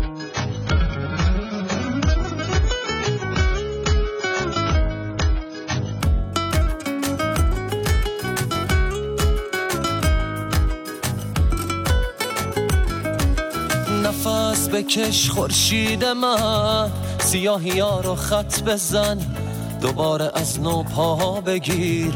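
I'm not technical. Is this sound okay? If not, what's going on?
No, not at the start. For the first 6 seconds the audio is dull and smeary, with nothing above about 7.1 kHz. That's an adaptive stream starting at a low bitrate: the player began on a cheap version, then switched to a much better one at 6.0 s, with no gap.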